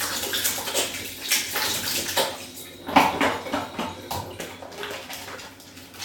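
Listening through the recording of everyday sounds, nothing stood out as a technical fault at any point.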